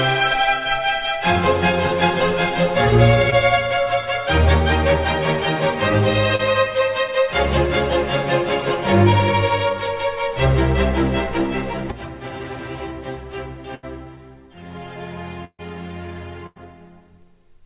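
At 3.30 to 3.34 s and again at 6.36 to 6.41 s there is short concealed packet loss: about 20 ms and then 40 ms of audio never arrived in time. The receiver patched each hole by extending the preceding sound and then blending back into the real signal, which leaves a brief smear or wobble. What separates these from the later bursts is that they are short.

Later, at 13.75 to 13.85 s, 15.45 to 15.61 s and 16.47 to 16.58 s, there are bursts of packet loss, with about 80, 140 and 100 ms missing. Here the concealment runs long enough to be heard as a held buzz or fading hiss. At 15.45 s the gap outlasts it and goes fully silent for about 60 ms before the sound picks up further on, with the material in between lost.

All of this rides on a narrowband call channel with nothing above 4 kHz, which fits G.711 mu-law at 64 kbps.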